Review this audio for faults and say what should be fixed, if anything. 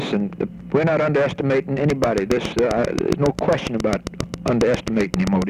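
A pulse source, likely interference from nearby equipment or a faulty connection, was injecting a repeated spike into the signal path from 1.90 s to 5.43 s. It fires at a steady 7.39 clicks per second, about thirty in all, each with much the same shape. The result is a regular train of clicks, heard as an even ticking well above the sound, at roughly 15 dB louder, and continuing through any pauses. Prevent it by rerouting or shielding cables away from noisy equipment and confirming the interface runs stably.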